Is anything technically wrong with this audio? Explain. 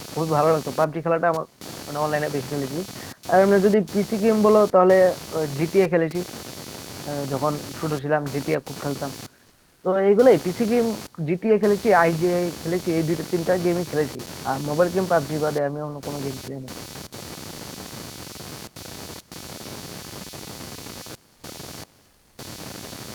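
Yes, two faults can be heard.

Computer activity noise runs through the whole clip: a buzzing, scratchy pulse repeating a few hundred times a second, roughly 15 dB below the speech. The processor's and peripherals' load currents disturb the audio circuit's shared ground, so the noise follows the computer's activity, not the sound. On a spectrogram it forms a comb of horizontal lines that rise and fall with the load; on a waveform, a regular ripple.

Comfort noise replaces the background from 21.35 to 21.43 s (80 ms) and from 22.05 to 22.37 s (320 ms). This is likely Opus discontinuous transmission: the sender stops sending during the pauses, and the receiver fills them with synthetic noise. The detailed room background, about 40 dB below the speech, becomes a flat, featureless hiss, about 1 dB and about 2 dB quieter. On a spectrogram the background texture turns smooth and uniform for those stretches.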